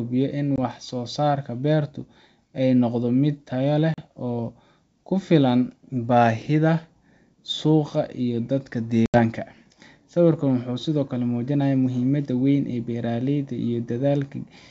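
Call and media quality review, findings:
Packet loss on ADPCM call, 0.56–0.59 s: hard-edged 20 ms silent hole, about one packet. Decoder's adaptive predictor and step size fall out of step with sender, so speech resumes slightly distorted, settling within tens of ms.
Same fault, 3.94–4.03 s: 40 ms gap, roughly two packets, same slightly distorted re-entry.
Same fault, 9.06–9.19 s: 80 ms gap, around four packets. Longest hole, same mistracking on recovery. G.722 wideband path itself clean.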